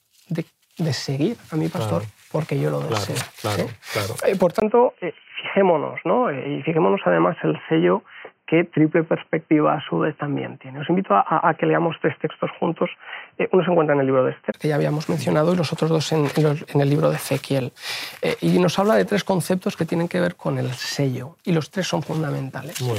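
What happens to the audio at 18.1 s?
Nothing goes wrong at 18.1 s; the audio plays through that moment cleanly, with no dropout, click or distortion.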